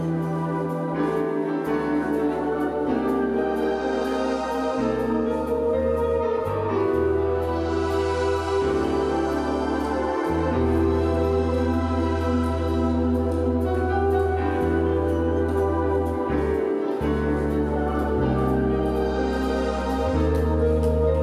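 No technical faults can be heard anywhere in this recording.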